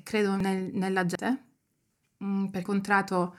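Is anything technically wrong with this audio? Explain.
Yes. The speech jumps forward abruptly at 0.40, 1.15, 1.90 and 2.65 s. This is audio missing between chunks. The recorder likely works in one-second chunks and loses roughly a third of a second at each changeover. The two sides are spliced directly together, with no gap.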